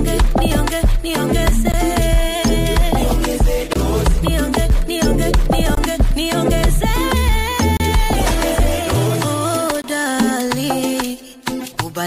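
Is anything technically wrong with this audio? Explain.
Yes, there's a gap between stream segments, showing up at 1.72, 3.73–3.76, 5.75–5.77, 7.77–7.80 and 9.82–9.84 s. The timestamps of consecutive 2-second segments don't quite meet, so the player drops in silence: hard-edged dropouts of roughly 16 to 30 ms, ticking along every two seconds, with nothing actually lost.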